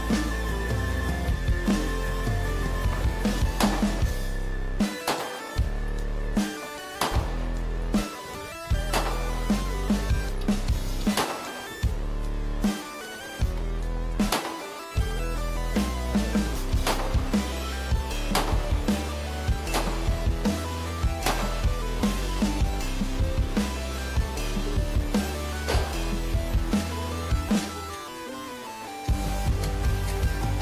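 No audible technical faults; the signal holds steady throughout with nothing to flag.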